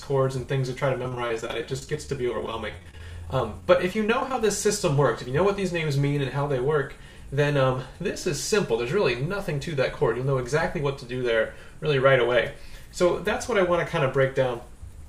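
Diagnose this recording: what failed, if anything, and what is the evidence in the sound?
From 1.03 to 4.34 s the sound turns choppy and robotic, with 36 short holes, the longest about 31 ms, some bridged by a stretched continuation and some simply missing. This is repeated packet loss on the network path: some of the lost packets were concealed by extending the preceding audio.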